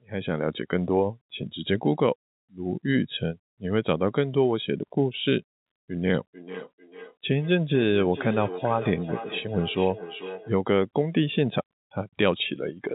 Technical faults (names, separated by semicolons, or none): feedback echo between two devices